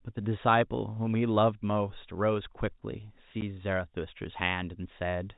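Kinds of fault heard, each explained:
Packet loss filled with silence: a piece of the transmitted stream never arrived and the receiver played nothing in its place, so at 3.41 s the speech drops out for 10 ms, a gap that fits one lost packet, with abrupt edges.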